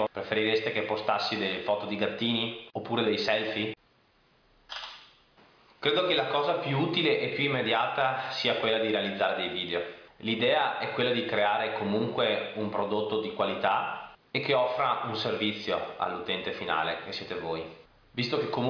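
Nothing goes wrong anywhere in this audio, so there's no technical fault to point to at any moment.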